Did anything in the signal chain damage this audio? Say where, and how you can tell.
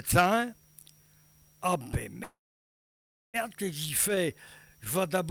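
Yes. A call audio freeze at the network stage, 2.23 to 3.36 s. Sound stalls into silence, then resumes with nothing lost. Late packets likely drained the jitter buffer.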